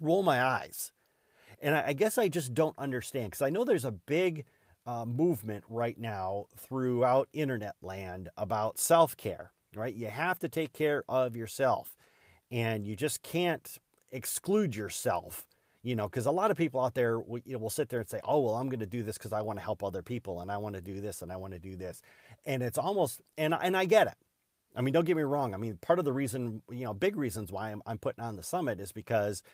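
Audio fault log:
No fault is logged for this speech clip.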